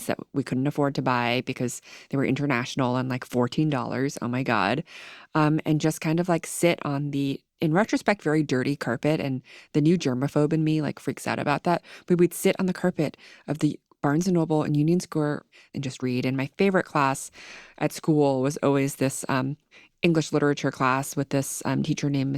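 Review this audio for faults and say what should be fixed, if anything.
Nothing to fix: no faults found in the speech.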